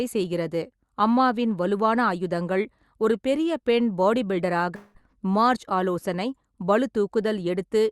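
At 4.75 s the speech breaks off for about 0.2 s, until 4.97 s. The last sound is stretched into a buzz or hiss that fades across the gap. There is no true silence before the speech returns. The likely cause is a long network dropout. Audio stopped arriving, and the receiver covered the hole by extending what it last had. The real sound from that stretch never plays. The call path limits the band to about 12 kHz throughout.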